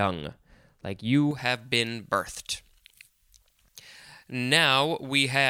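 From 1.31 s to the end at 5.49 s, the speech has pre-emphasis left on. The treble boost applied for recording or transmission was never undone by the matching de-emphasis, so high frequencies sit about 11 dB above 1 kHz at 10 kHz, a tilt that fits a J.17 curve. The result is thin and over-bright, with sibilants that hiss and cut sharply through the rest of the sound.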